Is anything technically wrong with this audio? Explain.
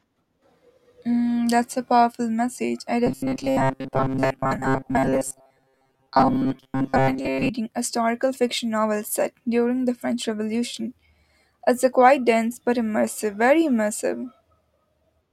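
Yes. Robotic sound from repeated short buffers runs from 3.07 to 7.50 s. New audio likely arrived too slowly, so the playback filled gaps by looping a slice of about 7.5 ms, replacing roughly 70% of the real audio. The speech becomes a rigid, metallic buzz at 133 Hz.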